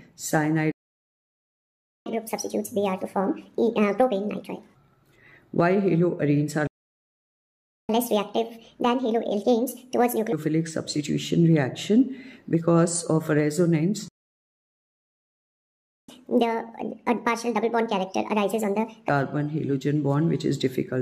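The sound cuts to silence at 0.71 s for 1.34 s, at 6.67 s for 1.22 s, and at 14.08 s for 2.0 s. These are playback stalls, likely the player running dry of data. After each, at 2.06–4.75 s, 7.89–10.33 s and 16.09–19.09 s, it rushes at 1.5 times speed, pitched roughly seven semitones higher. This is catch-up at higher speed, resampling the backlog to regain lost time.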